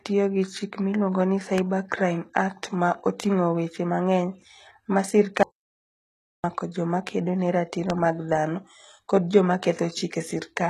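The speech carries a gritty, metallic edge in its s sounds and upper consonants for the whole clip, and nothing sits above about 12.3 kHz. The treble sounds synthetic, with its fine structure failing to line up with the lower harmonics. This points to HE-AAC compression, which likely rebuilt the top band by copying lower bands upward under a coarse envelope rather than coding them. The plainly audible damage fits a low bitrate, around 16 kbps.

At 1.58 to 1.60 s a single sharp loud pop jumps out over the speech, roughly 15 dB above it, while the talking continues underneath. This is likely a brief voltage step from a plug, switch, static discharge or driver glitch, shaped by the circuitry downstream into a short crack.

From 5.43 to 6.44 s the sound cuts off completely for about 1.01 s, leaving dead silence with no room tone, then resumes mid-flow. This audio dropout to silence likely came from the input being lost while the recorder kept writing silence, so whatever was said in that second is gone.

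A second loud pop of the same kind, again roughly 15 dB above the speech, lands at 7.90 to 7.92 s with the sound running on beneath it.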